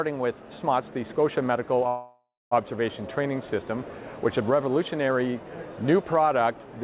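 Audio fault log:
1.88–2.53 s, call audio freeze: the sound stalls for about 0.63 s. The last sound is stretched into a fading fill that ends in roughly a quarter second of silence, and then the audio resumes exactly where it stopped, so nothing is lost and everything after it arrives 0.63 s later. This is likely a late packet burst that drained the jitter buffer. The narrowband G.711 A-law path, with nothing above 4 kHz, band-limits the fill like the rest of the audio.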